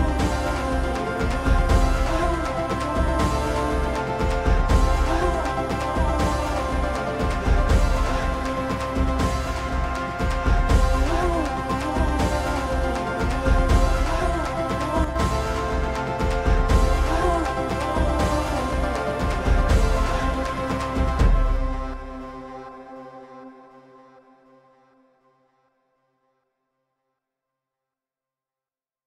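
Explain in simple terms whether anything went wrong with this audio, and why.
A brief one channel drops out fault occurs from 15.04 to 15.16 s, about a tenth of a second. During that moment the sound suddenly drops in level, then returns to its normal loudness, with nothing else about it changing. The likely cause is that one side of a stereo recording briefly went missing before the two sides were combined into a single channel. With only one side contributing, the combined sound lost part of its strength for that instant.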